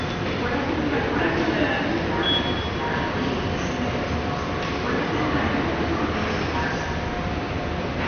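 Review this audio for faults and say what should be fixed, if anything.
Throughout the clip the sound is dull and grainy, with a gurgling, granular edge. Nothing is heard above 6.5 kHz. Upper detail flickers in and out, and what remains sounds coarse. The likely cause is MP2 compression at a low bitrate, which fits around 48 kbps. The encoder splits the audio into sub-bands and starves them of bits, so the top bands shut off and the rest are quantised roughly. To prevent it, encode at a higher bitrate or use a more efficient codec.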